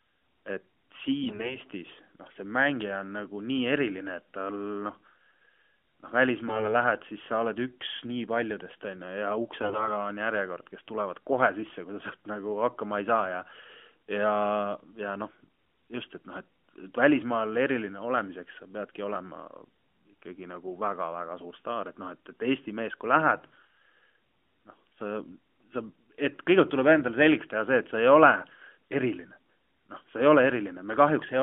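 Speech that turns briefly hoarse, scratchy and gargly at 1.24–1.57 s, 6.47–6.74 s and 9.62–9.89 s, roughly keeping pitch and level. These are AMR bit errors, with roughly 4, 7 and then 10 percent of bits flipped. The codec's weaker bits arrive corrupted, misplacing excitation pulses and skewing fine pitch, gain and spectral values. The narrowband AMR codec runs at 12.2 kbps, and the band is limited to about 250 Hz to 3.4 kHz.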